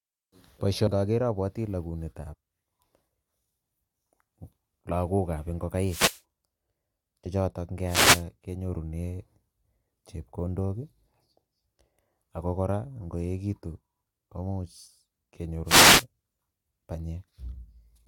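At 0.86 s the speech jumps ahead by about 150 ms with a short smeared blip instead of a click. It jumps again by about 100 ms from 2.32 to 2.35 s, and by about 20 ms at 7.25 s. These are compressed frames skipped: whole frames never reached the decoder or were rejected. The gaps are multiples of a 23.2 ms frame, which fits losses of several frames, a few frames and a single frame. Overlap between neighbouring frames blurs each join.

From 5.84 to 6.21 s, 7.86 to 8.24 s and 15.65 to 16.05 s, a swish of static rises over the speech and drops away. These are wireless microphone noise hits, where reflections cancel the FM radio signal and the receiver's own noise floods in.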